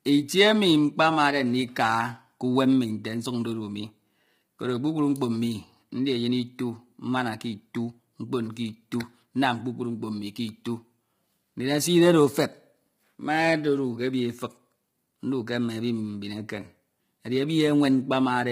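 Low-delay AAC compression runs throughout the speech, likely from AAC-ELD at a bitrate around 24 kbps. Its short frames resolve pitch harmonics poorly, so with few bits the voice turns heavily rough and grainy, with noise filling the gaps between harmonics and a thin, synthetic top band.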